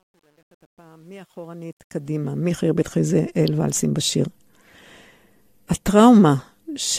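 From the start to about 2.6 s, the speech fades in with truncation distortion on a fade. Undithered low resolution (the grit fits about 10 bits) forces the quiet waveform onto a few square steps. It is worst from 0.0 to 1.63 s, where it sounds gritty. On a waveform the low start looks stair-stepped and blocky; a spectrogram shows broadband speckle rather than faint, continuous energy. The fade's gain curve rises until 2.59 s.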